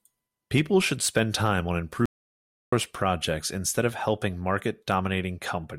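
Speech that cuts abruptly to dead, roomless silence from 2.06 to 2.72 s, an audio dropout to silence losing about 0.67 s, likely from the input briefly disconnecting while recording continued.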